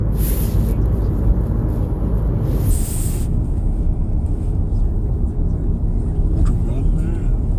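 From 2.71 s to the end, this everyday-sound recording drops to a slower, lower version of itself, running at 0.726 times speed and about 5.5 semitones flat. This is a wrong sample rate: the audio is played back without conversion, consistent with 44.1 kHz material played at 32 kHz.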